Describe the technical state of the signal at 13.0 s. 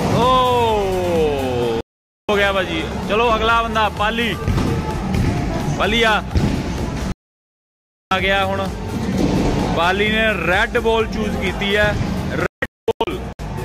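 At 13.0 s the signal is inside a digital broadcast dropout running from 12.46 to 13.40 s. The receiver mutes on corrupted or missing frames, so the sound breaks into several silent holes, the longest about 0.22 s, totalling roughly 0.58 s of lost programme.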